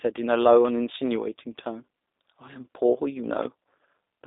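From start to finish the speech carries G.729 codec damage: nothing above 3.8 kHz survives, the band sits at roughly 300 Hz to 3.7 kHz, and the plainly rough, synthetic texture fits an 8 kbit/s model-based coder rebuilding each frame from filter, pitch and pulse parameters.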